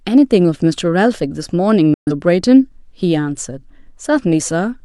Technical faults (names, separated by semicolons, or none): digital broadcast dropout